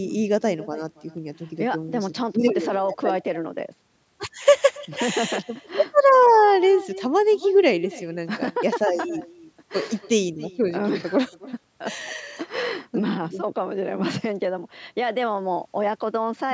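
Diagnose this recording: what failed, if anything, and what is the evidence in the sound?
Echo with no canceller, throughout: each phrase returns about a third of a second later at about 20 dB down, as the far-end loudspeaker feeds its microphone uncancelled.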